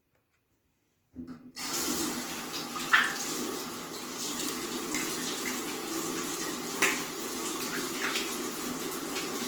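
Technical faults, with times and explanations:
Throughout, Opus compression: sound turns grainy, rough and noisy up to about 20.1 kHz, likely from Opus music-mode coding at a starved bitrate near 16 kbps.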